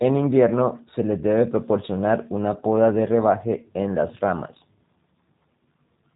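From start to finish the speech carries G.729 codec damage, and it's plainly audible. Everything above about 3.8 kHz is gone, so it sounds boxed-in, and the rough, slightly synthetic texture fits an 8 kbit/s codec rebuilding the speech from a filter and a few pulses.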